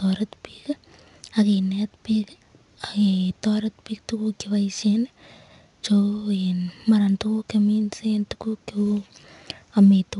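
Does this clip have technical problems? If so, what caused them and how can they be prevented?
Yes: 4-bit ADPCM compression throughout the speech leaves gritty hiss riding on loud passages and nothing above 10.6 kHz. Unlike a steady noise floor, it vanishes in pauses. Prevent it by storing the audio with linear PCM or a higher-rate codec.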